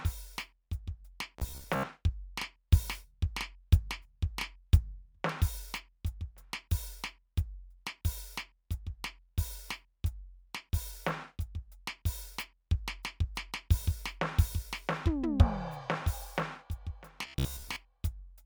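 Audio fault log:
1.39–1.86 s and 17.22–17.76 s: robotic sound from repeated short buffers. The music turns into a rigid metallic buzz near 66.7 Hz, likely from the playback repeating a roughly 15 ms stretch while fresh audio arrived late, replacing about half, then most, of the real sound.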